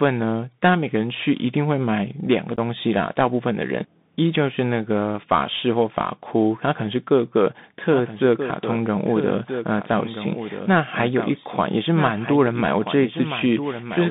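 Narrowband, scratchy speech runs through the whole recording: everything above about 3.7 kHz is missing, the low end thins out below about 150 Hz, s sounds come out harsh and gritty, and a fine granular hiss sits under the voice. That is the Bluetooth CVSD headset codec at work. It sends one bit per sample at 64 kbps, just saying whether the waveform steps up or down, with a step size that adapts. Sharp, loud high-frequency energy outruns that step and distorts, and the constant hunting produces the hiss. Around 2.56 to 2.59 s there is a tiny hard-edged hole, about 15 ms of audio gone, which fits roughly two lost packets. This is unconcealed Bluetooth headset packet loss. Packets between headset and phone never arrived, and nothing filled the gap, so silence or an idle pattern sits where that stretch of speech should be. From 7.84 s to the end, a second full-band copy of the speech trails the first by roughly one and a half seconds, about 10 dB quieter. 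It cuts in abruptly, with no reverberant tail or room colouring. The likely cause is a doubled audio track, where the same signal was captured a second time through a slower path, or an edit left two out-of-step copies mixed together.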